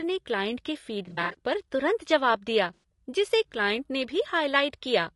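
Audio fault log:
throughout: low-delay AAC compression, likely AAC-ELD at a bitrate around 32 kbps; short frames blur harmonics, leaving rough, grainy speech with noise between harmonics and a synthetic top band.
1.05–1.35 s: AAC frame loss with concealment, after "ने क्लाइंट के"; about 160 ms of gaps scattered over 280 ms, each no longer than about 40 ms, filled from earlier spectrum, giving smeared, phasey patches.
2.74–2.83 s: AAC frame loss with concealment, after "पर तुरंत जवाब दिया", before "जिसे क्लाइंट ने"; a 100 ms gap filled from the last good spectrum sounds noisy and smeared.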